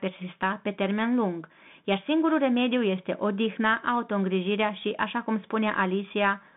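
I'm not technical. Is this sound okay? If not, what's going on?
No, not quite. The whole clip has been squeezed through a Bluetooth CVSD headset codec, the basic mode a wireless headset falls into during calls. It keeps only a narrow slice of the sound, roughly 150 Hz up to about 3.6 kHz, with nothing at all above 3.8 kHz, so the speech sounds thin and boxy. The damage is plainly audible: the s sounds get scratchy, and there's a gritty hiss underneath the speech from start to finish.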